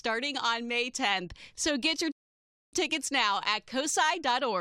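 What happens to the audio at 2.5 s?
At 2.5 s the audio is inside a rebuffering stall. The sound cuts to silence at 2.12 s and returns at 2.73 s. The player ran out of downloaded audio and waited for more. Playback then picks up exactly where it stopped. Nothing is lost, but about 0.61 s is added.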